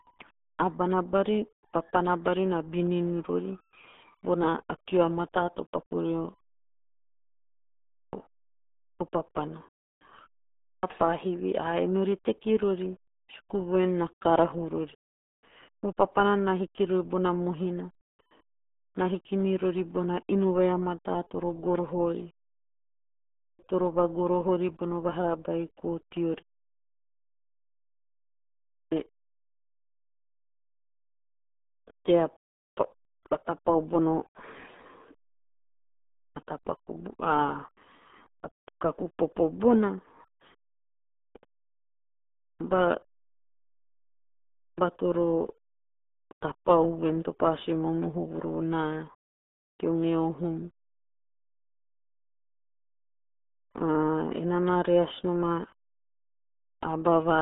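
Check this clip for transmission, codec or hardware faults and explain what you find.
Two faults stand out: heavy codec damage across the whole clip, and three clipped starts after pauses.

The RealAudio 14.4 codec damage runs throughout. Nothing above about 3.8 kHz survives, so the speech sounds muffled and gargly, which fits an 8 kbit/s dial-up-era coder squeezing everything into a narrow phone-style band.

There are clipped starts after a pause at 10.6 s, 23.33 s (just before "toro vagoroho") and 28.65 s. Roughly 230 to 270 ms of onset goes missing each time, after silences of 0.41 s, 1.03 s and 2.25 s. The playback device dozes off in the gap and wakes late.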